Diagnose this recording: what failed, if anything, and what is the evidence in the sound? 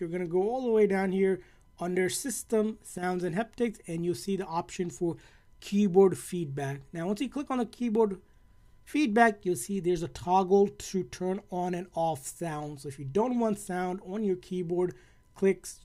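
A brief one-channel dropout occurs from 2.98 to 3.03 s, lasting about 50 ms. Across that window the level of the summed sound drops abruptly by about 6 dB and returns just as sharply, with no fade at either edge. That is what happens when one side of a stereo pair goes silent before a mono fold-down: content shared by both channels loses half its contribution. The stage is likely the analogue wiring, such as an intermittent cable or connector contact.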